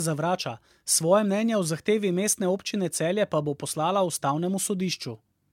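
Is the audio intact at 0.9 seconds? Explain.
No. At 0.9 s, as across the whole speech clip, the sound shows generation loss: it is swirly, smeared and hollow, with blurred consonant onsets, more so than a single AAC encode at around 96 kbit/s would explain. The likely cause is repeated lossy AAC re-encoding, perhaps around four passes, each requantising on a shifted frame grid so the errors pile up. A spectrogram shows a hard ceiling near 17 kHz.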